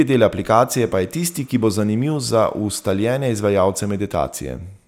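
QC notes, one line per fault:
0.79–4.00 s, timecode bleed: a faint, steady chirping warble sits behind the speech, very low at roughly 40 dB below it. Linear timecode running at 30 frames per second has leaked in, its square wave flipping between pitches near 1 kHz and 2 kHz.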